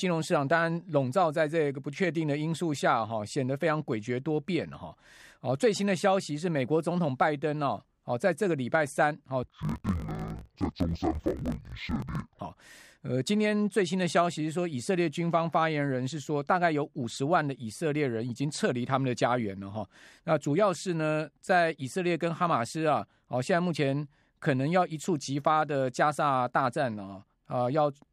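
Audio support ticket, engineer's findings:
Speech 9.43–12.40 s, octave low, doubled, choppy: interleaved audio read as planar at the deinterleaver, 21.77 ms blocks. Spectrogram shows halved harmonic spacing and 45.9 Hz vertical striping.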